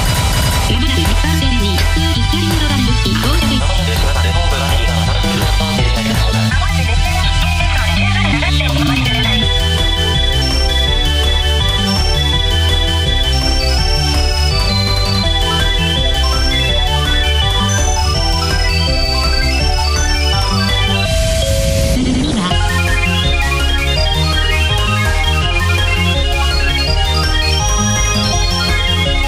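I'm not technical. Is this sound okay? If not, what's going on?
Yes, this sound is okay, and there's nothing going on that needs fixing.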